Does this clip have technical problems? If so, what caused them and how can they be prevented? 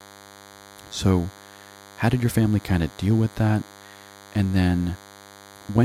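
Yes. DECT cordless phone buzz runs throughout the speech, roughly 25 dB below it. A nearby DECT handset or base transmits a brief radio burst 100 times per second; the audio circuitry rectifies each burst, producing a thin, harmonic-rich 100 Hz buzz. Keep DECT phones and bases well away from microphones, cables and preamps, and use shielded, balanced cabling.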